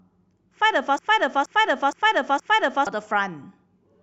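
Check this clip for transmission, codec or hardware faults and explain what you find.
One fault stands out, a broken-record loop from 0.99 to 2.87 s. A 0.47 s fragment of speech repeats exactly, back to back, four times, and the speech that belonged in that stretch never arrives. The likely cause is a stalled player, encoder or stream that kept resending the last fragment it held.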